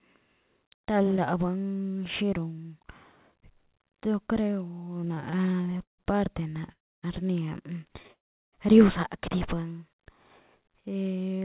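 From 5.0 to 6.01 s the speech keeps catching in repeated stalls, a stutter where the jitter buffer ran dry 16 times (longest gap 152 ms) and the receiver stretched the last sound to fill about a third of that stretch. A shorter burst follows at 6.50 to 6.71 s.

Then come two call audio freezes, at 6.72 to 7.06 s and 8.13 to 8.56 s. The sound hangs briefly and drops to silence for 280 ms and 370 ms. That's likely packets held up in transit, with playback resuming where it stopped, about 300 ms and 400 ms late.

At 11.03 to 11.40 s there's a jitter buffer speed-up. The receiver trimmed around 40 ms of tiny pitch-period slices to shed backlog, so the speech runs about 8% fast at unchanged pitch and sounds a touch rushed.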